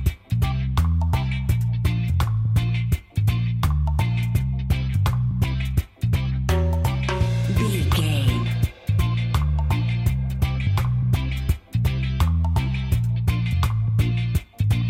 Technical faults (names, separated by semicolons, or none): none